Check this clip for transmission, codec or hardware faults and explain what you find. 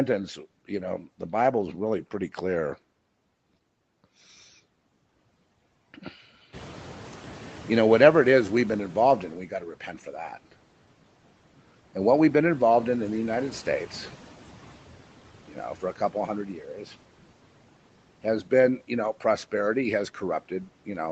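Two noise-suppression faults appear in this speech, both caused by the call's suppressor misjudging the background.

Noise suppressor catching up, 6.52 to 9.43 s: the room noise jumps near 6.5 s, and the suppressor's estimate trails it for 2.91 s. The louder noise leaks through before sinking by about 10 dB.

Speech cut by the noise suppressor, 9.51 to 10.13 s and 16.61 to 16.94 s: the suppressor treated brief speech fragments as noise and dropped them by up to about 7 dB and 6 dB, so they sound swallowed.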